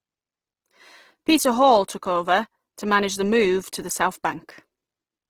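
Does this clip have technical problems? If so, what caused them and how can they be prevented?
Yes. Throughout the speech there is plainly audible roughness: consonants and vowels sound grainy and noisy rather than swirly, yet the top end stays open, reaching about 20.4 kHz with no muffling. This points to a likely cause in Opus compression in its music (CELT) mode at a low rate, suggesting about 16 kbps. The encoder preserved each band's energy but filled starved bands with folded or noise content. Encoding speech at a higher Opus bitrate, or letting Opus use its speech-oriented mode, would prevent this.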